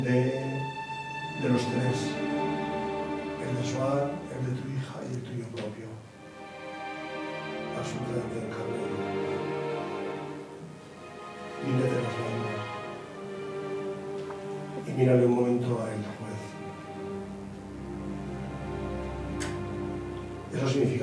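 Nothing stood out on listening to this recording.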